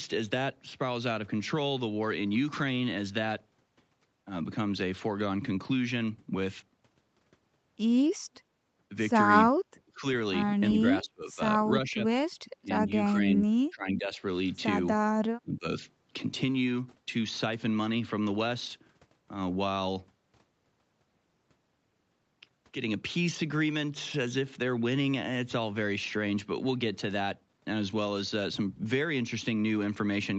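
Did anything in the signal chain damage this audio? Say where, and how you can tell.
Yes, at the call-processing stage. The speech drops sharply in four places: 9.75 to 10.06 s (about 30 dB down), 10.72 to 11.41 s (about 25 dB), 12.58 to 14.21 s (about 20 dB), and 15.42 to 15.66 s (about 25 dB). This pattern is likely speech suppressed in double talk: with far-end audio on the loudspeaker, the echo canceller mistook local speech for echo and attenuated it. The 8 kHz band limit from the Opus call path is expected, not damage.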